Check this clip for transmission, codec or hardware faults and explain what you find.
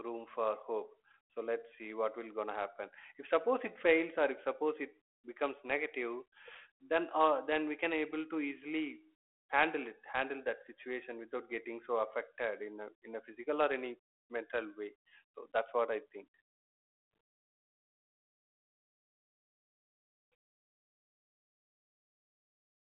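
Nothing here points to a fault: the speech comes through the 32 kbit/s G.726 telephone path with its usual 300 Hz to 3.4 kHz band, and there's nothing else to flag.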